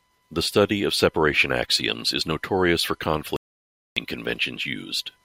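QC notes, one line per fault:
3.36–3.97 s, audio dropout to silence: Just after "axioms is notorious for", the speech cuts off mid-flow and about 0.6 s of silence follows. No room tone or background remains in the gap, so the break sounds like a hard switch rather than a pause. Speech resumes abruptly at 3.97 s. This is likely a lost input, with the recorder writing silence until the signal returned. Whatever was spoken in that span is gone.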